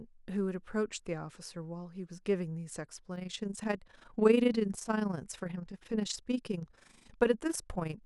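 From 3.16 s to the end, the speech takes on a fast, rough tremolo: overlap-add ripple, where frames rejoined with mismatched overlap swing level about 11 dB, around thirty times a second.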